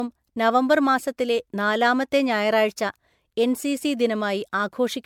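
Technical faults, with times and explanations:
Throughout, generation loss: swirly, hollow speech with blurred attacks, too damaged for its 19.9 kHz bandwidth, likely from about three MP3 re-encodes near 96 kbit/s.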